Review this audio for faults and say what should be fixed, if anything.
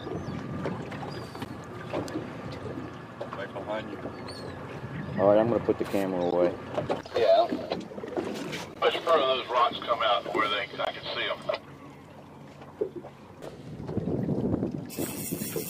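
Gap at a join of encoded pieces at 1.45, 6.31, 8.74 and 10.85 s: short silences of 11, 14, 14 and 19 ms where separately encoded pieces retain encoder delay and last-frame padding. Prevent this by trimming each piece's encoder delay and padding before joining, or by encoding the whole audio in one pass.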